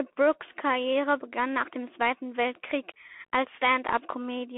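Bluetooth CVSD headset codec damage runs through the whole speech clip: the sound is squeezed into a telephone band of roughly 250 Hz to 3.4 kHz, with nothing above 3.8 kHz. The one-bit slope coding, which fits a 64 kbps link, leaves plainly audible scratchy s sounds and a granular hiss beneath the speech.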